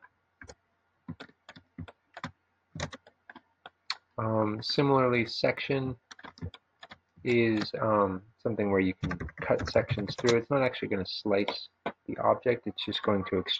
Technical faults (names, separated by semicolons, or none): noise suppressor applied to music or sounds; sound cut by the noise suppressor